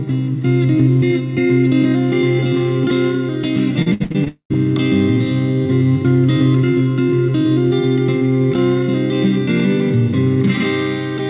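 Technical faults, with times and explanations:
3.82–4.56 s, repeated packet loss (robotic sound): the audio turns choppy, with half a dozen short holes, the longest 62 ms, patched over so that about 28% of this stretch is synthetic fill. Each time data failed to arrive, the receiver stretched the last bit of sound to cover the gap, and the next loss followed soon after. The repeated smeared copies give the buzzy, robotic texture, while the real audio from those moments never plays.
4.28–4.52 s, long network dropout: within that choppy stretch, the sound gives way to a fading buzz or hiss for roughly a fifth of a second and then 100 ms of silence before the audio returns, with about 0.22 s of material simply gone. This is the likely cause: for a sustained run nothing reached the receiver, so it extended the last sound until that decayed into quiet. Everything here is band-limited, with nothing above 4 kHz, which fits a narrowband call codec.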